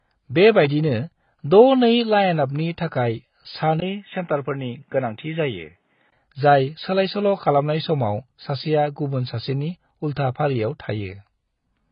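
The whole clip sounds dull and smeared, with warbling sibilants and nothing above 5.1 kHz, likely from heavy AAC compression at a very low bitrate, consistent with about 16 kbps.

From 3.80 to 6.12 s the speech turns boxier and narrower, cut above 3.8 kHz, after a 20 ms gap, with a faint new background noise and much the same level. The likely cause is the input switching to a poorer device and back.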